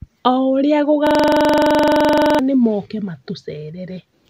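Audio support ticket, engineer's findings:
System hang loop, 1.07–2.39 s, speech. A 42.67 ms slice of audio repeats exactly, 31 times, giving a machine-gun stutter at 23.4 Hz. This fits a 2048-sample ring buffer replayed by the audio hardware while the host or driver froze. About a second and a half of real audio is lost. On the waveform, identical blocks tile the span. On the spectrogram, a frozen spectral slice repeats with vertical seams at each 42.67 ms boundary.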